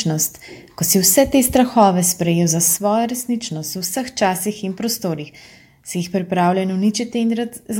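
At 2.77 s the audio abruptly drops by about 6 dB and stays at that reduced level through to the end, with no fade or recovery. The sudden, sustained step points to one channel dropping out: if one side of a stereo signal was likely lost and the pair then summed to mono, material shared by both sides would fall by half in amplitude, and anything carried only on the missing side would vanish entirely.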